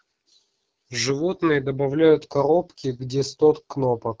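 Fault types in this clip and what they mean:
AMR wideband (HD Voice) codec: speech is modelled from a pulse-driven vocal tract estimate with noise-filled top band; the rough, raspy texture throughout fits a low mode around 8.85 kbit/s.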